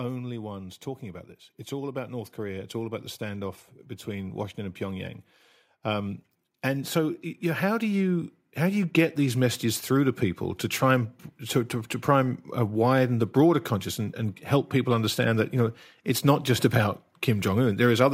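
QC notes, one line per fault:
1.0–5.23 s and 5.82–9.64 s, automatic gain rising: in each span the automatic gain control judged the input too quiet and ramped its gain upward by about 7 dB over roughly four seconds. Because the gain acts on the whole signal, the speech and the background noise swell together, so the room seems to creep closer while the talker's level climbs. The second rise repeats the pattern.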